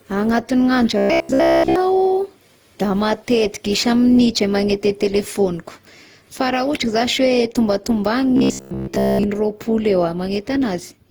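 Generation loss runs through the whole of this speech recording: the sound is swirly, smeared and hollow, with blurred attacks. It points to Opus at around 48 kbit/s, likely decoded and re-encoded many times, each pass adding fresh quantisation noise on a shifted frame grid. Robotic sound from repeated short buffers appears from 0.98 to 1.76 s, and again from 8.37 to 9.24 s, as a rigid metallic buzz at 66.7 Hz that still roughly tracks the speech. The buzz likely comes from a 15 ms segment being looped while new audio arrives too slowly. In the first stretch the sound is replaced almost entirely, and in the second, most of it.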